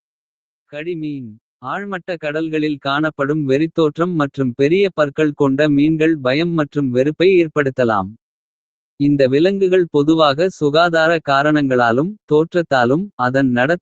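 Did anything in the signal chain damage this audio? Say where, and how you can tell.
Yes. In call processing, automatic gain rising over 0.7 to 4.43 s lifts the level by about 12 dB after judging the input too quiet, so speech and background swell together.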